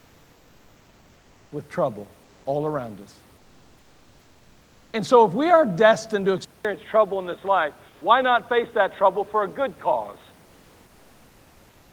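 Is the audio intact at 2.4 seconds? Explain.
No. From 2.23 to 2.43 s, between "with trouble" and "all around us", the real room background is replaced by comfort noise for about 200 ms. Once the speech pauses, the sender likely stops transmitting under discontinuous transmission, which fits Opus DTX, and the receiver fills the gap with synthetic noise. That noise sits at the same level as the room noise, about 38 dB below the loud parts. Unlike a dropout or muting, the gap is never silent. The only change is that the textured room noise becomes a smooth, featureless hiss until the speech returns.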